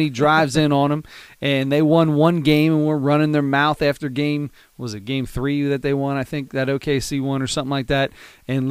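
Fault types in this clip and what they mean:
No technical faults can be heard anywhere in the speech recording, and the signal holds steady throughout.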